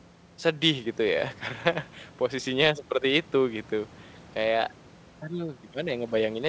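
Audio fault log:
No faults logged; the speech arrives over a WebRTC call path using a G.722 codec, consistent with a 64 kbps stream, with nothing above 8 kHz as that codec's band limit implies.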